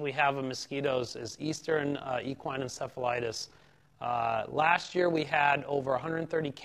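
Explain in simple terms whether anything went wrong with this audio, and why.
Something did go wrong. From about 0.86 s to the end, the level rapidly pulses up and down, giving a fast, rough flutter. This is overlap-add ripple. The audio was chopped into overlapping pieces and stitched back together, but the overlaps didn't blend evenly, so the loudness dips once per piece, around forty times a second. Unlike a dropout or glitch, nothing goes missing. The wobble is steady and regular throughout.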